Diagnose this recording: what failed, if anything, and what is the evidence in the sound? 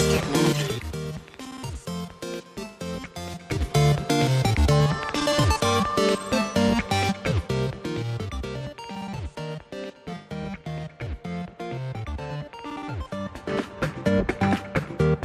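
Zipper noise at the gain stage: 3.36–3.76 s, the level rises roughly 10 dB at about ten steps per second, then 6.92–8.48 s falls roughly 15 dB at about three per second. Each unsmoothed 3 dB jump clicks, showing as a staircase envelope and thin vertical broadband lines on a spectrogram.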